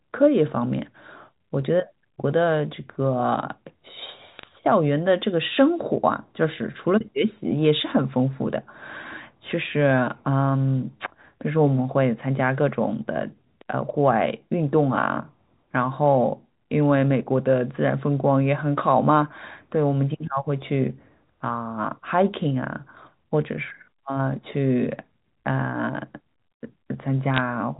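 Bit errors on a digital phone line, with roughly one or two bits in a thousand flipped, produce brief bursts of damaged samples from 4.39 to 4.43 s and from 27.34 to 27.38 s. Each flipped bit corrupts individual samples of the G.711 mu-law stream.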